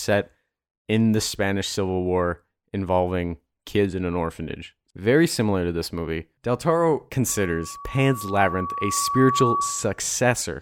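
At 7.28 s a loudspeaker feedback squeal begins under the speech. A single tone near 1.1 kHz appears and swells over roughly two seconds. It ends up louder than the speech, by around 5 dB, and holds until 10.01 s. The cause is a closed loop. The microphone hears its own loudspeaker, and at 1.1 kHz the loop gain exceeds one. That frequency feeds on itself and grows into a steady howl.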